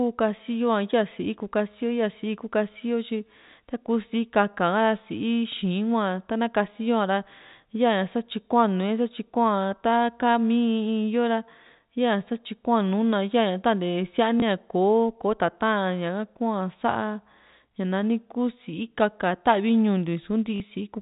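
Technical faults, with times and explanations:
14.40–14.42 s and 20.56–20.60 s: packet loss with last packet repeated. A 20 ms gap, then a 40 ms gap, was filled by replaying the previous 20 ms packet. The single repeat causes a small blip, and the two-packet run a brief robotic stutter. These show as repeated waveform blocks.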